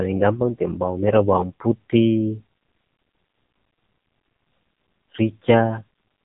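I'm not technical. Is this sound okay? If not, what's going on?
No. All the way through, the speech sounds thin, buzzy and robotic, like an old mobile phone call. That is the AMR narrowband mobile codec, squeezed hard: nothing above about 3.8 kHz survives, and rebuilding the voice from few details gives it that synthetic buzz.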